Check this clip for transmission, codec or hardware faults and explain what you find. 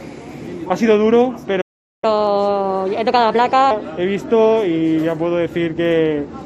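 Two playback faults are audible, a stall followed by a sped-up catch-up. From 1.61 to 2.04 s there is a playback stall: the player likely ran short of data or was blocked, so the output drops to silence for about 0.42 s mid-flow. From 2.04 to 3.71 s comes catch-up at higher speed: the player resamples its backlog at 1.25 times normal rate, so the sound runs fast and sits about four semitones high before settling back.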